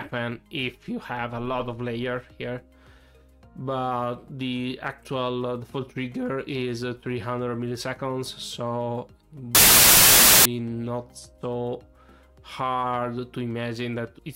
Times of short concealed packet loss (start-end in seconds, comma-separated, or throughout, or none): none